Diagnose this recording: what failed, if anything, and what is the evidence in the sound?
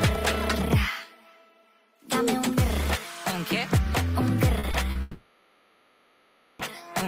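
The network stage shows short concealed packet loss at 4.59–4.65 s, 4.71–4.75 s and 4.91–4.97 s, heard as brief smears or wobbles of 40, 20 and 40 ms. The receiver extended the preceding sound and blended back, unlike a click or mute.

From 5.01 to 6.61 s, about 1.6 s of audio is replaced by a continued buzz or hiss that fades rather than dropping to true silence, then resumes without the lost section. This is likely a long network dropout, whose length sets it apart from the brief concealments just before.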